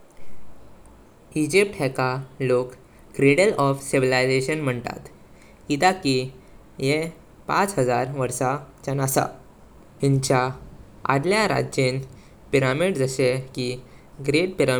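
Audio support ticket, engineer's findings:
No technical faults found in the speech signal: audio path intact, with nothing to attribute to any component.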